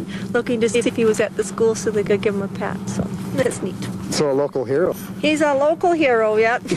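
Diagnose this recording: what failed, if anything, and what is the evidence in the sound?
Frames out of order, a network reordering fault: at 0.74–0.90, 2.06–2.09, 3.41–3.52 and 4.85–4.92 s, two neighbouring runs of frames play swapped, giving a garbled flutter. No time is lost.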